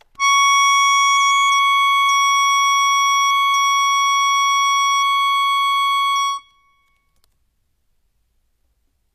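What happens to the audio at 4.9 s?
At 4.9 s the music's treble sounds gritty and metallic, bright but not quite real, with nothing at all above 14.6 kHz. This is not a momentary event: the same coloration runs through the whole clip, and the damage is plainly audible. The likely cause is HE-AAC compression at a rate that fits roughly 24 kbps. The codec keeps only the lower spectrum and fills in the highs by copying lower bands upward under a coarse envelope, so the upper harmonics fail to line up with the ones below.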